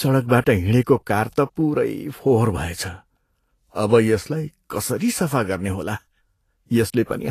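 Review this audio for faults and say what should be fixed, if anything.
Throughout the speech, the treble sounds hissy and grainy, with roughened consonants and blurred onsets, likely from Vorbis compression at a low bitrate, around 34 kbps. Fine high-frequency detail is coarsely quantised into noise of similar energy. A spectrogram shows a hard ceiling at 14.2 kHz with speckled texture below it. Re-encode from the original at a higher Vorbis quality setting, or deliver uncompressed audio.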